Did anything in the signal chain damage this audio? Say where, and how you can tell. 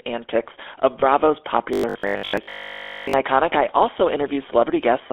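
Yes. The codec stage damaged the whole clip. The speech has the buzzy, gravelly roughness of the GSM full-rate codec. It sits in a narrow band from about 300 Hz to 3.5 kHz, which fits the 13 kbps full-rate coder's pulse-driven vocal-tract model.

The network stage caused lost GSM frames from 1.00 to 1.03 s. The sound briefly holds as a rough, metallic ring instead of moving on. That points to one lost 20 ms frame, filled by repeating the last good frame's settings.

From 1.73 to 3.13 s the speech turns into a rigid, metallic buzz at 50 Hz. It still roughly follows the speech. The likely cause is robotic sound from repeated short buffers at the driver or buffer stage. A 20 ms block is replayed, and most of the real audio is skipped.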